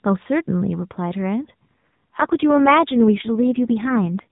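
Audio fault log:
1.68 to 4.26 s, AMR rate drop: the speech turns rougher, buzzier and more synthetic, with the same narrow band and no gap. The mobile codec has switched to a much lower rate, consistent with a fall from 12.2 to 4.75 kbps, leaving fewer pulses to model each frame.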